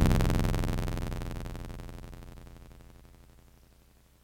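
Filter restarted on every block, throughout the music: the filter drops its stored state at each block boundary and starts from silence, so every block opens with a small transient. The result is a buzz at about 86.1 Hz, which fits a 512-sample block, rising and falling with the music's level.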